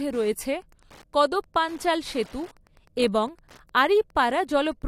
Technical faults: Wi-Fi interference

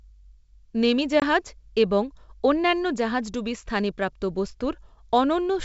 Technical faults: packet loss on an ADPCM call

